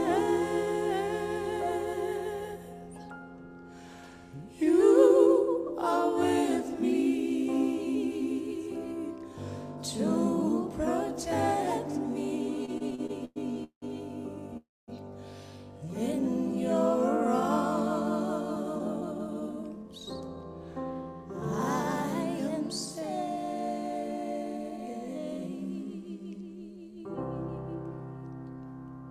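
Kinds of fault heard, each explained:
repeated stalls (stutter): From 12.65 to 13.84 s the audio halts seven times because late packets keep emptying the jitter buffer. The receiver stretches the last sound across each gap, up to 181 ms. About a third of that span is filler, so the sound drags but loses nothing.
call audio freeze: At 14.57 s the audio stops for about 0.31 s. A short fading continuation gives way to 230 ms of silence. Then the sound resumes where it left off. Packets were likely held up in transit, draining the jitter buffer.
jitter buffer slow-down: Between 15.78 and 16.53 s the receiver rebuilds its reserve by repeating single pitch periods and bits of pauses. This adds 63 ms. The sound plays at 93% speed with unchanged pitch, so it comes across slightly drawn out.
jitter buffer speed-up: From 18.56 to 20.37 s the buffer holds too much audio. The receiver cuts out short pieces of one or a few pitch periods, roughly 0.3 s in total. 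Playback runs at 114% speed with the same pitch and sounds hurried.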